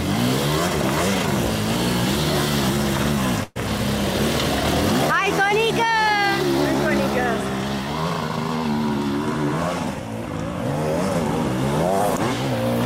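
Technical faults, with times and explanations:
3.43 to 3.57 s, burst of packet loss: for about 120 ms the last sound before the gap is stretched out and gradually turned down, leaving a held, fading tone or hiss where fresh audio should be, and playback then picks up further along with that stretch gone. The receiver was covering for several lost or late packets in a row. Unlike a plain dropout, the gap is never silent, and unlike a click it lasts long enough to hear the decay.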